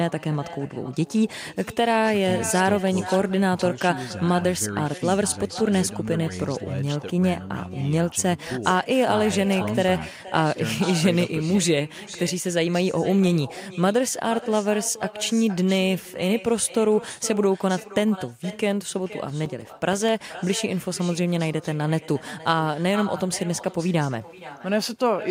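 From the start, every phrase is shadowed about half a second later by a thinner copy about 16 dB down: echo with no canceller, the far end's loudspeaker feeding back into its microphone unremoved. Between 18.98 and 20.09 s, eight short ticks, each only a few milliseconds, are CD scratch ticks, where damage defeats the disc's error correction on each revolution.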